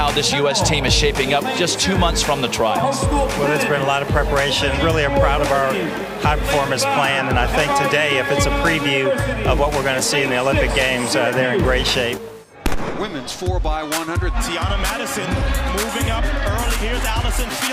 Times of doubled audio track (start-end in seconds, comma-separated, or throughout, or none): none